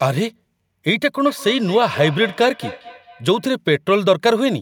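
From 1.26 to 3.52 s, feedback echo between two devices: each phrase returns roughly every fifth of a second, about 16 dB down. A second device's playback re-enters the microphone uncancelled.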